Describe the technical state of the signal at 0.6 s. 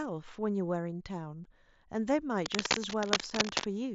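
At 0.6 s the speech is intact, with no fault present, passing through the mSBC Bluetooth headset codec as a normal wideband link.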